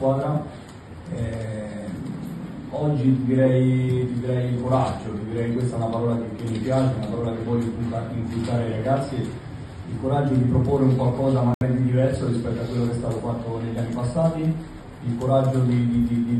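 At 11.54 s, audio packets likely missed their delivery window, a Bluetooth dropout: the sound cuts abruptly to silence until 11.62 s, then resumes further along.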